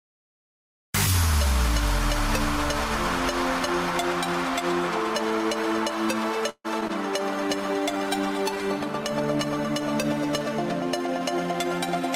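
At 6.49 s the sound stops moving forward for about 150 ms, until 6.66 s. The last moment is stretched into a fading buzz or hiss that drops to silence for its final 50 ms. The likely cause is a call audio freeze: packets stalled in transit and the jitter buffer ran dry, so the receiver extended what it had. Nothing is lost. The audio resumes exactly where it paused, which separates it from packet loss, and it now runs about 150 ms later.

Two short concealed packet losses follow, at 6.80 to 6.83 s and 6.87 to 6.91 s. Here audio really is missing: about 40 ms in the first and 20 ms in the second. Only a sliver was synthesised, 9 ms and 16 ms, blended back into real audio, so each is a brief smear or wobble rather than a held tone. Unlike the freeze, the sound skips ahead instead of pausing. The first loss also removes roughly 30 ms of the delay built up moments earlier.

From 7.34 s to 11.77 s a call bitrate drop takes the encoder from 64 kbps down to 24 kbps. 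It stays at the floor for about 2.4 s. The falling bandwidth estimate forced coarser Opus coding, so the sound turns rough, watery and duller in the top end. It lasts seconds rather than milliseconds, and the timing stays intact, which is what distinguishes it from the brief concealment events.

Overlapping its tail, from 11.07 s to 12.12 s, a jitter buffer speed-up plays the audio about 7% fast. Roughly 70 ms is cut in small pitch-period pieces to shed excess buffered delay. The pitch does not rise, unlike a simple resampling error. The sound just feels slightly hurried and compressed in time.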